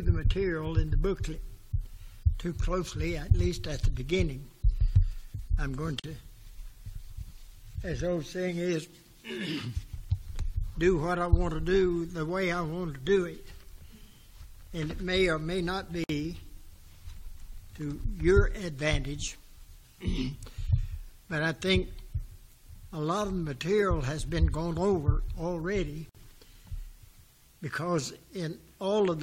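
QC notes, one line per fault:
6.00–26.15 s: gap at a join of encoded pieces. Gaps of 44 ms at 6.00 s, 54 ms at 16.04 s and 54 ms at 26.09 s cut into continuous sound, one every 10 s. Each piece was encoded on its own and then butted together untrimmed, so encoder start delay and last-frame padding remain as silence. Unlike a dropout, the regular spacing and the sound resuming exactly where it stopped show nothing was lost; the edges are codec-smeared rather than clicky.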